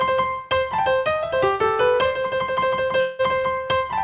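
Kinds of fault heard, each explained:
Call audio freeze: from 3.0 to 3.22 s the sound stops advancing, and its last moment is stretched into a buzzy or hissy, fading continuation of about 190 ms. Nothing is lost, and the audio then resumes where it stopped, about 190 ms late. The likely cause is packets held up in transit until the jitter buffer emptied. A spectrogram shows flat, smeared horizontal bands below the 4 kHz ceiling, and the waveform shows a repetitive, decaying envelope.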